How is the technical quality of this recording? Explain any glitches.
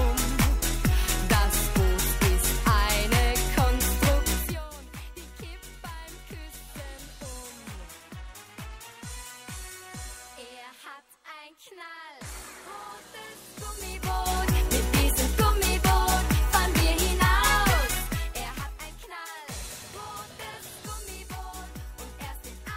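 No technical faults are audible.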